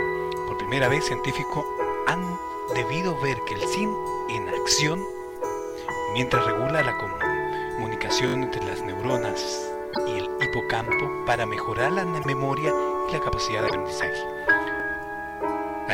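The audio has two kinds of fault. A repeated buffer occurs at 1.5 s, where one short slice plays twice and sounds like a click or tiny buzz. It happens again from 8.28 to 8.34 s, where the slice plays four times in a row as a brief stutter, and once more at 14.8 s, again a single extra play. Each repeat is about 20 ms long, which fits a 20 ms playback buffer that wasn't refilled in time, so the device replayed the last one. Nothing is skipped; the repeat is inserted. On a waveform the identical 20 ms shapes sit side by side with a hard step at each join, and a spectrogram shows a thin vertical line at every seam. The second kind is a broken MP3 bit reservoir, heard at 9.93 to 9.98 s, 12.21 to 12.26 s and 13.67 to 13.72 s as a short, roughly 50 ms patch of garbled sound where the audio jumps ahead. This is likely caused by MP3 frames being cut out: the next frames reach back for data borrowed from earlier frames and decode the wrong bytes instead, spoiling about two 24 ms frames. 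On a spectrogram each spot is a small block of smeared, unrelated energy or a gap that breaks the surrounding pattern, and the waveform shows a matching discontinuity.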